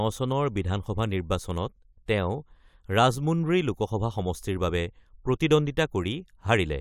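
No dropouts, clicks, distortion, level jumps or timing errors turn up anywhere in this speech recording.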